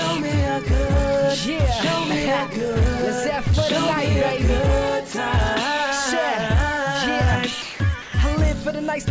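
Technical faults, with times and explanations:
5.12 s, 7.62–7.80 s, 8.02–8.14 s, sound dropped by the voice detector: quiet sound likely judged as background and replaced by comfort noise, which appears as flat, featureless noise patches on the spectrogram.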